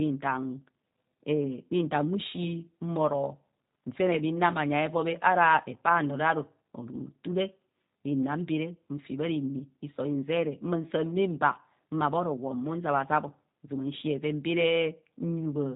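Speech coded with a G.729 codec, plainly audible throughout as a slightly rough, synthetic timbre, which fits an 8 kbit/s speech model. A spectrogram shows nothing above 3.8 kHz, and harmonics look smeared and blocky where pulses replace the real excitation.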